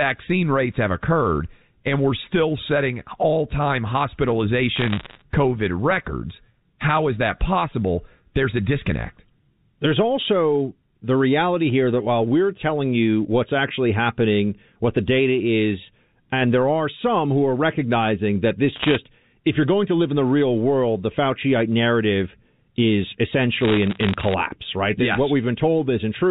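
At 4.76 to 5.22 s, again at 18.76 to 18.96 s between "are recognizing that this" and "if you're going to", and at 23.61 to 24.34 s after "narrative is", sharp ticks and crackle break out: bit errors on a digital phone line, with roughly 1, 1.5 and 0.7 percent of bits flipped respectively. Each flip corrupts a single A-law sample, so the ticks sit over unbroken speech, unlike packet loss, which leaves gaps or smeared repeats.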